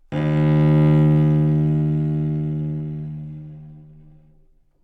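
A short recording of sounds, with no technical faults to be heard anywhere in it. Nothing in the audio points to a problem in how it was captured or delivered.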